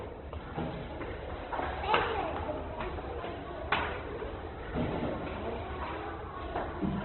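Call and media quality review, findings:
Opus compression, entire clip, likely the encoder running CELT music mode at a very low rate, consistent with roughly 12 kbps. Bit starvation forces band filling by folding and noise, plus a narrowband limit: nothing above 4.2 kHz. Result: heavy damage across the sounds, with dull, band-limited highs and grainy, rough, noisy texture where tonal detail should be.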